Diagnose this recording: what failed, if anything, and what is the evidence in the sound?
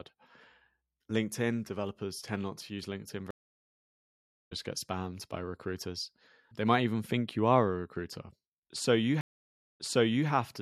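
Stream reconnect at 3.31–4.52 s and 9.21–10.29 s, a network-stage failure: the speech drops out for 1.2 s, then for 0.58 s. A fresh decoder restarts mid-stream, resuming about 0.7 s later, then 0.5 s earlier.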